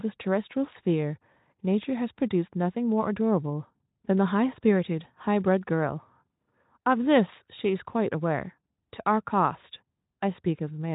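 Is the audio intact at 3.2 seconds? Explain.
Yes, at 3.2 seconds the audio is intact, with no fault audible at that moment.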